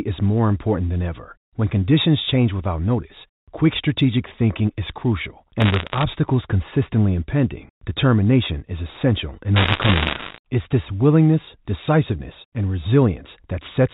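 Bit errors on a digital phone line appear from 5.60 to 6.04 s, right after "strategic thinking is crucial" and ending before "consistently impending determination is", and again from 9.56 to 10.38 s, after "determination is essential in". Flipped bits in the mu-law stream corrupt single samples, so the speech carries sharp ticks and crackle. The error rate sounds like roughly one percent in the first burst and a few percent in the second, which is denser.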